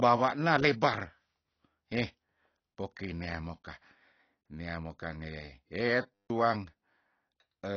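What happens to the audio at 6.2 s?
A system hang loop runs from 6.14 to 6.30 s. The computer or driver stalled while the sound hardware kept replaying its ring buffer, so one 10 ms piece of audio repeats 16 times. That produces a steady buzz at 100 Hz and swallows roughly 150 ms of speech.

Throughout the clip, including this moment, nothing remains above 6.5 kHz and the codec damage is plainly audible, leaving the speech dull and smeared. This is likely AAC compression at a low bitrate, around 24 kbps. The encoder quantised the frequency lines against a hearing model and lowered the cut-off.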